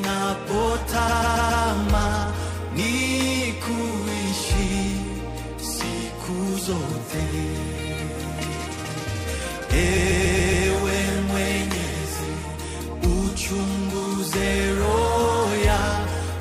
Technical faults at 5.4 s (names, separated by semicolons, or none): none